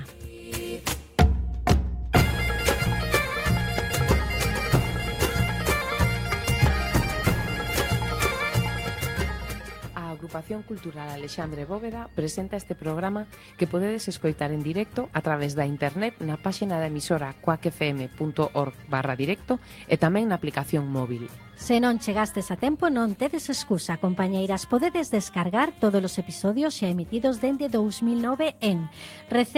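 There are no technical faults to describe in time order here.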